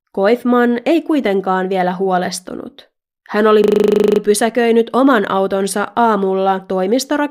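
A system hang loop runs from 3.64 to 4.20 s. The computer or driver stalled while the sound hardware kept replaying its ring buffer, so one 40 ms piece of the speech repeats 14 times, a rapid stutter at 25 Hz, before playback resumes with essentially nothing skipped.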